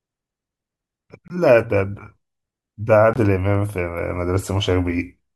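At 1.28 s and again at 3.14 s the speech drops into dead silence for about 34 ms, cutting in abruptly each time. That's a corrupt frame muted: damaged bits made the decoder reject what sounds like a single compressed frame, and the player filled it with silence while keeping timing intact.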